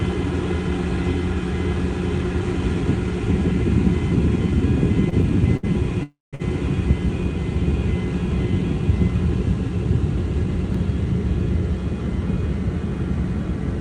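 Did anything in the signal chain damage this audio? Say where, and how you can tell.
Yes. The damage happens at the network stage, in the receiver's jitter buffer. There are short stalls from late packets at 5.09 to 5.14 s, 5.57 to 5.65 s, and 6.35 to 6.42 s. At each one the last sound is held too long, with a faint buzz or dip, for about 23, 62 and 50 ms. Then the audio resumes from the same point. Nothing is lost. Each stall adds its own length of delay.

There is a call audio freeze from 6.03 to 6.35 s. The sound turns into a fading buzz or hiss, and then about 180 ms of silence follows. In total, about 295 ms is filled in. Afterwards the audio carries on from where it stopped, so a gap has been inserted and nothing is missing. The likely cause is packets held up in transit, which drained the jitter buffer completely. The third stall follows immediately after it.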